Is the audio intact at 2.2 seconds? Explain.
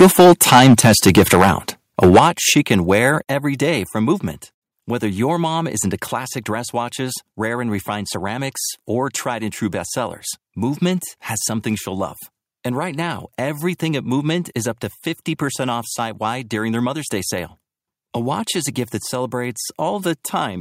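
No. From 2.03 to 2.26 s the loudest syllables crackle harshly, likely microphone overload pushing peaks about 9 dB past the converter's limit; the waveform shows flat-topped peaks, with extra high-frequency smear on a spectrogram. At 2.2 s the microphone volume is stepped down: voice and background drop abruptly by about 8 dB, likely an automatic gain cut, seen as a sudden, sustained shrink in waveform height.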